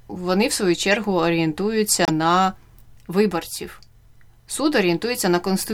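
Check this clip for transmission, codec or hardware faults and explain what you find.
Two codec faults turn up in this speech clip, both corrupt frames that were decoded anyway.

Corrupt frame decoded, at 0.91 to 0.96 s just after "вони в свою", and at 2.05 to 2.10 s just before "на виборців": flipped bits in a couple of compressed frames, then a few, made the decoder misplace spectral energy. Each 50 ms error peaks near −10 dBFS and −5 dBFS respectively.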